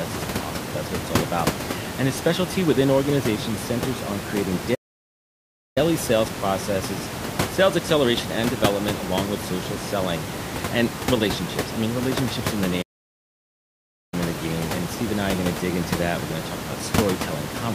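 The speech stops dead at 4.74 s and returns at 5.78 s, a gap of about 1.0 s. It happens again from 12.82 to 14.14 s, about 1.3 s. These are playback stalls. The likely cause is a player starved of data or blocked, so output falls silent, taking the room noise with it.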